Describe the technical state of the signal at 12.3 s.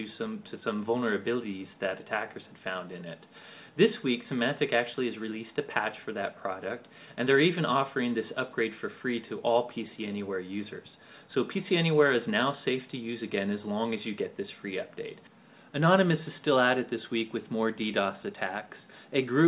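At 12.3 s the signal is intact, with no audible fault at that moment.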